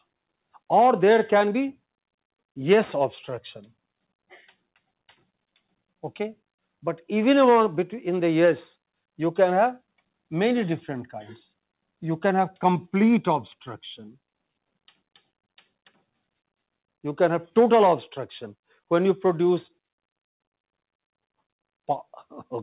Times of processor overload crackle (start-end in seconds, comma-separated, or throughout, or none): none